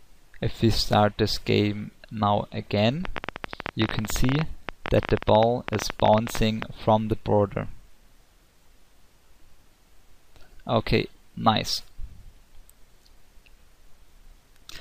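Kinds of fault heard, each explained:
Train of clicks: From 3.05 to 6.63 s, about fifty similar clicks at roughly 15 per second, unevenly spaced and about 15 dB above the sound, likely from electrical interference or a faulty connection or power supply. On a spectrogram they appear as thin vertical lines; on the waveform, as sharp spikes.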